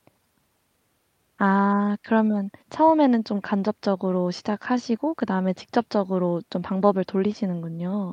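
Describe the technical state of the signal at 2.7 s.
At 2.7 s the speech signal is intact, with no dropout, distortion or other fault at that point.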